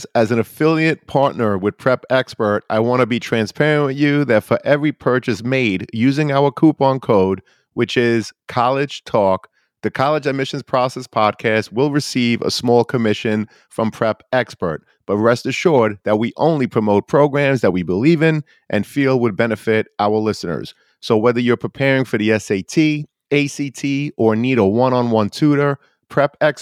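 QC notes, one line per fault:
0.18–26.53 s, clock slip clicks: faint, regular ticks about every tenth of a second, a few hundred in all, clearest on louder speech and absent in pauses. The likely cause is two unsynchronised clocks differing by roughly 200 ppm, so a single sample is dropped or repeated each time the drift totals one sample. On a spectrogram: evenly spaced thin vertical lines; on the waveform: tiny one-sample steps.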